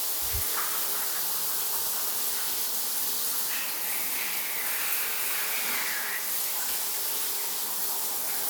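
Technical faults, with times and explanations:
Nothing technical stands out here; these sounds come through without any faults worth flagging.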